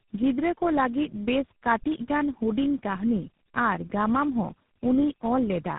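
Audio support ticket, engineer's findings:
Rough, muffled, warbly speech for the whole clip, nothing above 3.8 kHz. Probable component: inter-network links. Tandem speech coding: about three low-rate speech codecs in sequence, likely ending in a GSM full rate leg, each re-encoding the previous codec's damage, so the artefacts compound.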